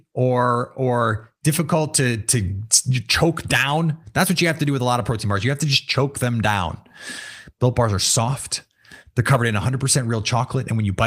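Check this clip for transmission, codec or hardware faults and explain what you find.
Nothing turns up here: the speech comes through with no transmission, codec or hardware trouble to point to.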